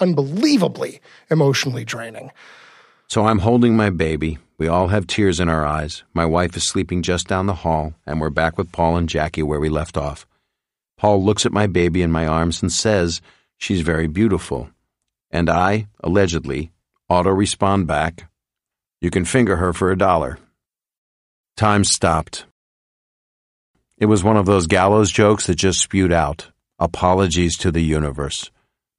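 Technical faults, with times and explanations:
No technical faults can be heard anywhere in the speech recording. There is nothing to list by time or to explain.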